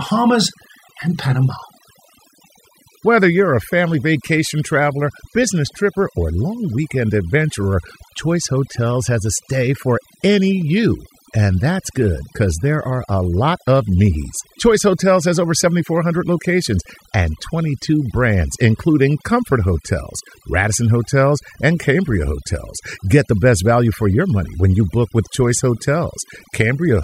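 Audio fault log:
Throughout: overdone noise removal. The noise reduction was pushed too hard on this speech, so any frequency band sitting close to the noise estimate gets pulled way down or dropped. The quieter parts of the voice go with it. That leaves near-silent gaps with twinkly specks.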